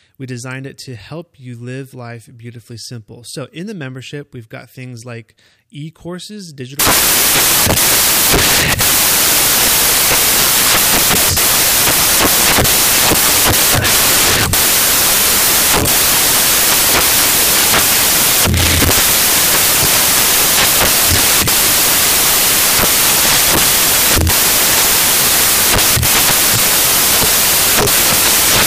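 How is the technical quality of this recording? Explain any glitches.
The recording breaks badly partway through. Right after "things like e courses", at about 6.8 s, the samples are being built from the wrong bytes, and that carries on to the very end. The reader is stitching each sample together wrongly, maybe shifted by a byte or with the byte order swapped, so the jittery low bits end up driving the big part of each value. What you hear is loud, harsh broadband noise, close to white on the louder speech.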